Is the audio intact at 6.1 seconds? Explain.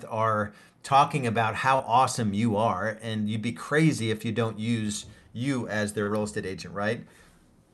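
No. From 6.03 to 6.1 s, between "don't use you as" and "real estate", there is a short concealed packet loss. About 40 ms of the call did not reach the decoder in time, and the receiver filled the gap by extending the preceding sound, repeating its pitch where it was voiced and substituting shaped noise where it was not, before crossfading back to real audio. It comes across as a brief smear or wobble, and a short consonant there can drop out.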